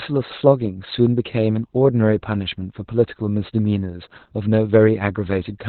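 Throughout, Opus voice compression in narrowband SILK mode cuts everything above 4.3 kHz and coarsely codes the excitation, consistent with about 8 kbps. Unlike a plain low-pass, the speech turns hoarse and faintly robotic.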